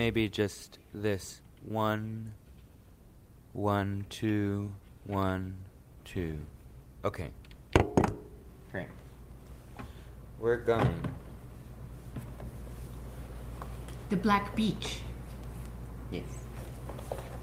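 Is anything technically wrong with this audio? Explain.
No, nothing is technically wrong with this audio.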